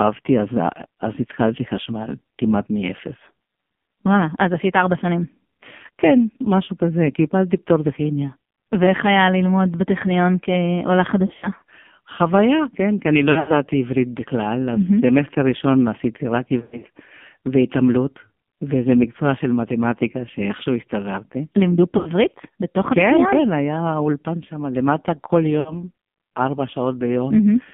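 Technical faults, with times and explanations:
Throughout: AMR narrowband mobile codec. The sound is confined to roughly 150 Hz to 3.5 kHz, with nothing above. It is heavily buzzy and synthetic, which fits a low bitrate near 5.9 kbps. Few pulses model each short slice.
11.26–11.50 s, 13.32–13.53 s, 16.60–16.86 s, 21.98–22.10 s, 25.60–25.74 s: lost AMR speech frames. The decoder reused the last good settings with falling gain. This caused warbles and brief fades. The gaps total 60 to 160 ms, with runs up to 80 ms.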